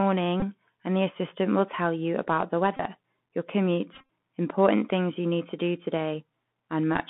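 Right through, the Bluetooth CVSD headset codec squeezes the sound into 150 Hz to 3.5 kHz, with plainly scratchy s sounds and a grainy hiss underneath. Then come Bluetooth headset packet repeats, where the last packet is re-decoded in place of lost ones every 3.75 ms, giving a brief buzz near 267 Hz. They hit at 0.40 to 0.43 s before "and the assistant will" and at 2.77 to 2.80 s after "tell you about the". A scattered patch runs from 3.93 to 4.08 s before "important things you need", with runs up to about 30 ms.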